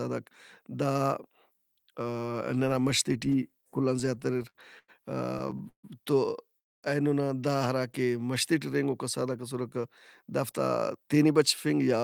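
Repeated stalls (stutter) run from 3.99 to 4.90 s, just after "کل آن", and from 5.38 to 5.85 s, just before "تو اینونا دا ہراکہ". Late packets drained the jitter buffer 10 and then 5 times, and the receiver stretched the last sound over each gap. That adds 220 ms and 192 ms, the longest gap 143 ms, so the speech drags and stutters without losing anything.

From 6.59 to 6.85 s a call audio freeze inserts a 239 ms gap, nearly all of it silence (230 ms), before the speech resumes where it stopped. The likely cause is packets held up in transit until the jitter buffer ran empty.

Jitter buffer speed-up follows from 9.38 to 10.53 s, after "ہراکہ مَشتے ٹی رہینگوکا", at 105% speed, trimming roughly 70 ms, then from 10.97 to 11.97 s at 109%, trimming about a tenth of a second. The buffer dropped short pitch-period pieces to reduce delay, so the speech sounds hurried at unchanged pitch.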